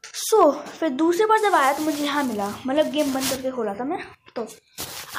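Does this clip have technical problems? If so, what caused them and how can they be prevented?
Yes. Hard clipping occurs from 0.39 to 0.43 s, where the signal exceeds what the converter or number format can carry by about 2 dB. The peaks are cut flat, producing a brief crackle with added high harmonics. Unlike soft clipping or saturation, which rounds peaks gradually and adds a warmer, smoother distortion, this has the abrupt, edgy grit of a hard ceiling. To prevent it, leave a few decibels of headroom by lowering input or recording gain before the converter.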